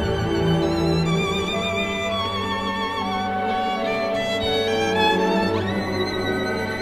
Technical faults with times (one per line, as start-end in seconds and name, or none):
none